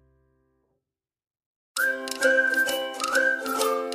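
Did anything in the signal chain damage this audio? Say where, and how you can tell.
No, nothing in the signal chain stood out as damaging this audio on listening.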